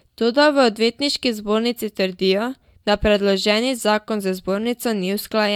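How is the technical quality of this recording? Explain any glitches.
No audible glitches or faults.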